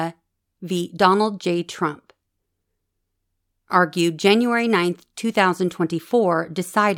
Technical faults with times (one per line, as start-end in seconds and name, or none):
none